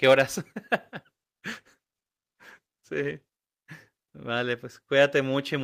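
From 1.13 s to 3.37 s the call's bandwidth estimate drops and the Opus encoder is pushed to spend far fewer bits, a call bitrate drop that sounds like a fall from around 40 kbps to about 17 kbps, holding at the low rate for roughly 2.18 s. With so few bits the speech is coded much more coarsely, so it turns rough and watery through that stretch before clearing as the rate recovers.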